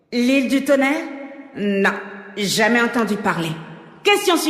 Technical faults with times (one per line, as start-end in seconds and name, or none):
1.96-4.01 periodic USB or driver dropouts